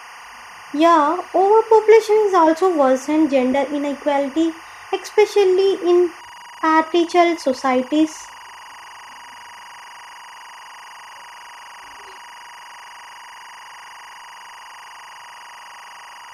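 A speech clip with timecode bleed running its whole length: a steady chirping warble, well below the speech at around 25 dB down, from linear timecode at 24 frames per second leaking in. A spectrogram shows continuous bands near 1 kHz and 2 kHz.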